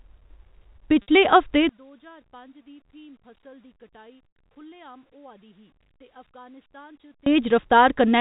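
At 1.02 s, a 60 ms packet loss with pitch repetition occurs: the receiver loops the last pitch period, giving a brief buzzy hold that fades before the speech cross-fades back in.

From 1.69 s to 7.26 s, the level falls by about 31 dB and the speech turns faint, most likely because one channel is inverted and the stereo channels cancel when summed to mono.

At 4.28 s, within that stretch, an 80 ms packet loss with pitch repetition produces the same sound, a held buzz fading towards silence before the speech resumes.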